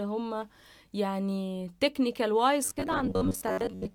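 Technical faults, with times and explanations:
2.65 to 3.94 s, robotic sound from repeated short buffers: the speech turns into a rigid metallic buzz near 94 Hz that still loosely follows the syllables. The likely cause is starved playback looping a roughly 11 ms segment and skipping about half the real audio.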